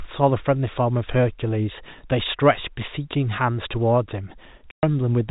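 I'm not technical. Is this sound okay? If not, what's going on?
No. At 4.71 s the speech drops into dead silence for about 0.12 s. That's packet loss filled with silence: a chunk of audio went missing and the gap starts and stops abruptly.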